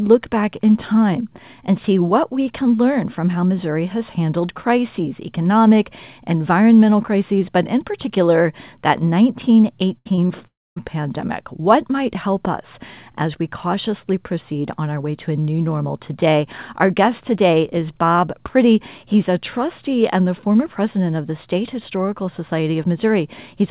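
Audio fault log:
9.98–10.07 s, burst of packet loss: about 80 ms missing; the last sound is held as a fading buzz or hiss, seen as smeared, decaying bands and a tapering waveform.
10.15–10.19 s and 10.27–10.31 s, short concealed packet loss: about 20 ms each patched by continuing the prior sound, heard as brief smears, visible as blurred, slightly repeated spectral slices.
10.47–10.84 s, long network dropout: the sound trails off as a decaying buzz or hiss, then about 240 ms of near-silence, likely from a stalled network; it shows as fading bands, then a blank gap.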